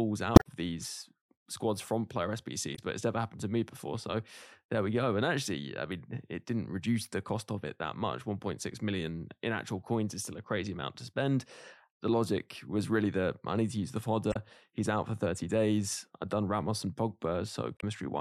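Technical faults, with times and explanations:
0.33–0.47 s (before "these squads from player"), 2.72–2.79 s (before "but it's never happened"), 14.29–14.36 s (after "need to use the") and 17.77–17.84 s, damaged data in a compressed stream: corrupted frames make the decoder misread them and lose sync, then hunt for the next frame header. Each event is a brief chirp, squawk, click or short hole.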